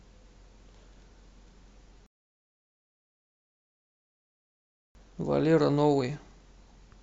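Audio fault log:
2.06 to 4.95 s, rebuffering stall. The speech stops dead and the line goes silent for about 2.9 s. It then picks up exactly where it left off. The player ran dry of downloaded audio and waited for more. Nothing is skipped, only delayed.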